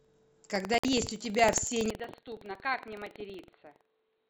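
From the start and through the whole clip, buffer tearing puts a steady robotic buzz at about 21.5 Hz under the speech, which fits a 2048-sample buffer. The writer and reader have slipped, so a small slice of each buffer carries audio about a tenth of a second old, with hard joins.

At 0.78 s a digital broadcast dropout mutes the sound until 0.85 s. The receiver stopped decoding when frames went bad, and 64 ms of programme is simply gone, which is consistent with two lost frames. The audio cuts to silence and returns mid-flow.

From 1.90 s to the end, the sound turns dull and boxy with no gap at the change. The band narrows, the level drops by roughly 10 dB, and a new noise floor sits around 50 dB down. The likely cause is an input switched to a poorer device.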